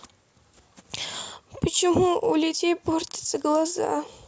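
No audible technical faults are present anywhere in the recording.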